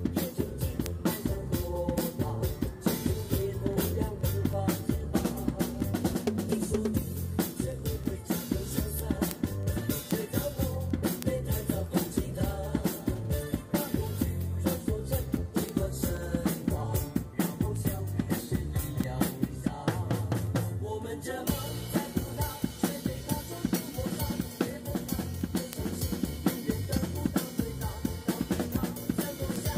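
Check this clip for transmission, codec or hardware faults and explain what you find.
One fault is present: word clock ticks. From 0.22 s to 29.72 s, sharp ticks of uneven strength repeat roughly every 0.15 s, around 200 in all. The receiving device is not locked to the sender's clock. Each time the two clocks slip, one sample is dropped or repeated. The rate points to a mismatch of around 150 ppm.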